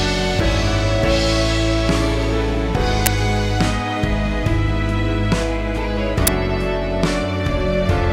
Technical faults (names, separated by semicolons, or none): uninitialised buffer